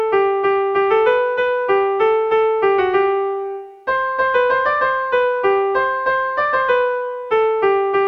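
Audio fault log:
No faults heard in this clip.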